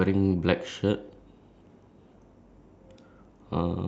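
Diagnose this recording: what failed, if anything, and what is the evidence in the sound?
Nothing failed in this recording.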